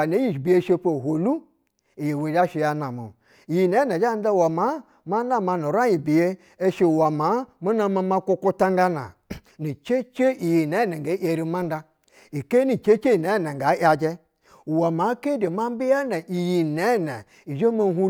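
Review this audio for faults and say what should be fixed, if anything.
No faults; nothing to fix.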